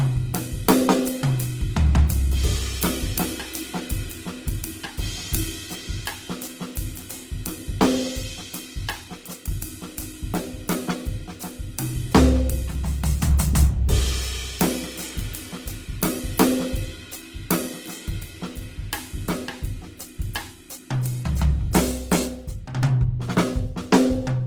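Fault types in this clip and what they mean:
Opus compression: The music has likely passed through an Opus encoder in its CELT music mode with too few bits, and the damage fits a rate near 16 kbps. Short of bits, the encoder keeps each band's energy but rebuilds the detail by folding lower bands upward or filling them with noise. Tones come out grainy, rough and noisy rather than swirling. The bandwidth stays full, reaching about 20.3 kHz, but the damage is plainly audible throughout.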